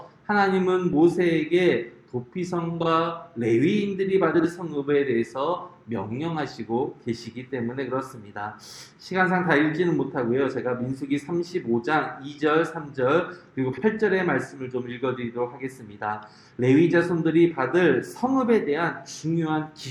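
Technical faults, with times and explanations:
2.80–2.86 s, 4.34–4.44 s and 13.72–13.83 s, frames out of order: in each spot two adjacent blocks of audio play in reversed order, so a brief stretch has its halves swapped. The first swaps two 24 ms blocks; the other two swap pairs of 48 ms blocks, which fits one and two codec frames on each side. The reordering produces a short garbled flutter, and no time is lost.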